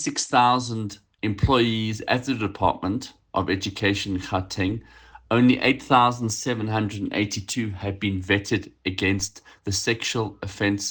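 From 0.81 s to the end there's imaging from linear upsampling, which fits a 24 kHz source raised to 44.1 kHz by straight-line interpolation. The top end sounds dulled, and a faint mirrored copy sits between 12 and 24 kHz, about 35 dB down, adding a light metallic shimmer.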